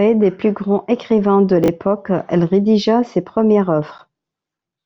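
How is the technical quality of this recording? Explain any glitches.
One glitch affects the recording. From 1.64 to 1.68 s, after "plus grands écrivains de", chunks play out of order: a 20 ms chunk arrives one chunk late, so the speech briefly jumbles at three hard joins. Unlike a dropout, nothing goes missing before "elle rédigea ses premières".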